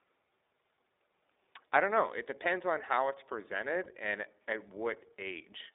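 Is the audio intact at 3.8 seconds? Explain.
No. From about 3.84 to 3.89 s, just before "and at", there are lost iLBC frames. A packet failed to arrive and the decoder filled the hole by repeating the last pitch cycle blended with noise. That gap fits a single 20 ms frame. It sounds like a brief held, faintly buzzy vowel rather than a click or silent dropout. Because each iLBC frame is decoded on its own, the voice snaps back cleanly at once instead of staying smeared for several frames as it would with a predictive codec.

Underneath this, the whole clip runs through the iLBC codec, which fits a rate of about 15 kbps. It is confined to roughly 300 Hz to 3.7 kHz, so there is nothing above that. The coding damage is plainly audible as a rough, synthetic texture on the speech. That steady, band-limited roughness runs throughout, unlike the brief concealment, which stands out only at that one point.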